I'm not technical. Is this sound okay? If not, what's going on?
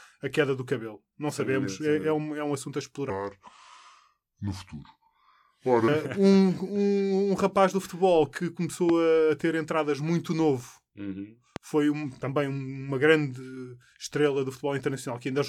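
No. Two kinds of problem can be heard in this speech clip.

From 3.10 to 5.88 s, just after "é um assunto a", there is a section at the wrong speed. The talking suddenly turns slow and dragging, and noticeably deeper, by roughly five semitones. That stretch plays at about 0.76 times its proper speed. The likely cause is that this piece was played back or edited against the wrong clock, so speed and pitch dropped together.

There are also two loud pops, each a single sharp click lasting a split second while the talking carries on underneath. The first comes at 8.89 to 8.92 s, between "rapaz do futebol que" and "a ter entradas muito". The second is at 11.56 to 11.59 s, between "entradas muito novo uhum" and "foi um também uma". Each is likely a sudden electrical jolt, such as from a plug, a switch or static, that got into the signal.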